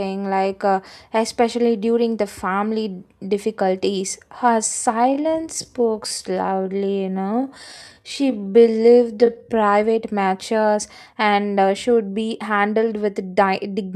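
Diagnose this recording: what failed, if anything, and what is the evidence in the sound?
Between 4.94 s and 9.66 s the speech abruptly slows to 0.67 times its pace, yet its pitch holds. That marks a time-stretched section, likely from software processing before storage that repeats short pieces. A slow playback clock would also lower the pitch.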